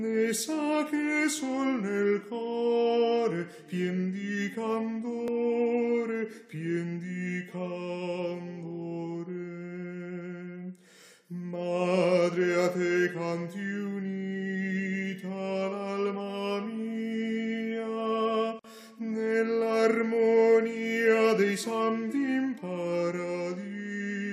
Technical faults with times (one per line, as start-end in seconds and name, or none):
5.28 dropped buffer (overrun)
18.59-18.64 gap at a join of encoded pieces